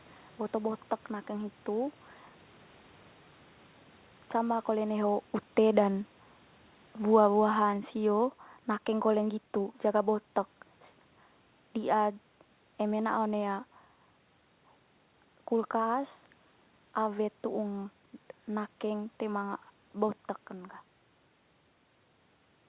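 Automatic gain falling from 4.35 to 10.14 s: the gain control judged the input too loud or its background noise too strong and eased its gain down by about 6 dB, so the speech and the room noise sink together.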